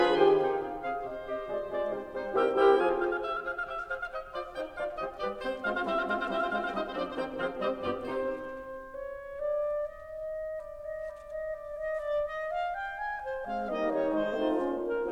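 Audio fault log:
No faults were detected in this music recording; the signal holds steady throughout, with nothing abnormal to log.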